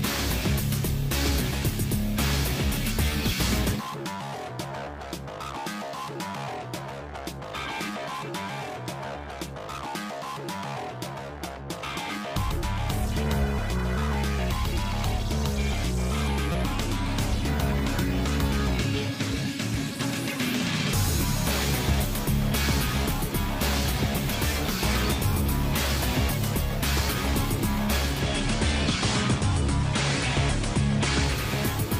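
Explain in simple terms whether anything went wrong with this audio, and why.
Yes, two kinds of fault can be heard.

Repeated buffer: at 9.76 s and again from 16.52 to 16.54 s, fresh audio didn't reach the player in time, so it replayed the last chunk it had, a piece about 5.8 ms long, which fits a 256-sample buffer. At 9.76 s that piece plays twice, giving a quick click. At 16.52 s it plays five times in a row, so the hard joins run together into a brief buzz. A tiny stretch of the real audio is lost each time.

Digital radio blending to analogue: from 27.95 to 31.55 s, the receiver lost its digital signal and switched over to the FM broadcast of the same station, then back to digital. Each switch is a cross-fade of about a third of a second (345 ms), not a sudden cut. While the FM version plays, a layer of hiss sits well below the sound. The overall loudness stays the same through the switch.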